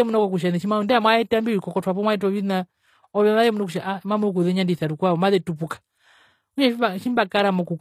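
Across the whole clip the upper frequencies of the speech sound gritty and metallic, with s sounds turning lispy and the treble bright but not quite real. This is the character of HE-AAC compression, which is likely at work here at a low bitrate, consistent with something around 24 kbps. The codec keeps only the lower spectrum and synthesises the top by copying lower bands upward under a rough envelope, so the rebuilt harmonics fail to align with the true ones.

From 7.29 to 7.31 s, a brief hiss of about 27 ms creeps in just ahead of a sharp onset, softening and smearing the attack. This is pre-echo. The transform codec spreads its quantisation noise across an entire block, and because this attack lands late in its block, noise scaled to the loud moment also fills the quiet stretch before it, where nothing masks it.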